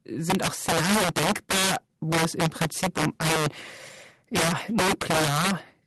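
Integer overflow runs through the whole speech clip. The signal was pushed about 12 dB past full scale, and instead of being limited, every peak over the ceiling wrapped around to the opposite extreme. Roughly 7 percent of the samples get flipped this way, so each loud syllable comes out with harsh, splintering cracks, far nastier than clipping. Underneath, the call path's Opus coding is audible as coding texture and a top end stopping around 12 kHz.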